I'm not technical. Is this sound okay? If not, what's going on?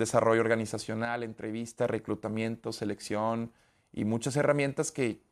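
No. There is a sudden gain jump from 1.05 to 1.78 seconds. The speech abruptly drops to a noticeably quieter level, and the background noise drops right along with it, then both snap back up at 1.78 seconds. Nothing in the recording itself changed. The likely cause is a volume setting inside the equipment or software being switched instantly rather than eased in gradually, so everything in the sound shifts at once.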